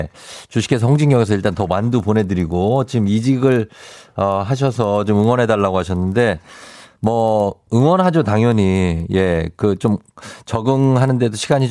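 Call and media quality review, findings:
Resampler restarted on every block, whole clip. Steady 25 Hz tick during speech, silent in gaps. 40 ms blocks converted independently, likely 48 kHz to 24 kHz, leaving errors at block edges.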